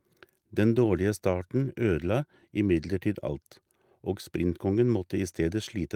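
No technical faults are audible.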